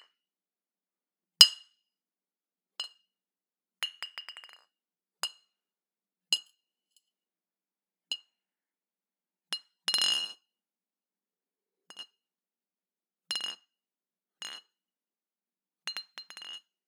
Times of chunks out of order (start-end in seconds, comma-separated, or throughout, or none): none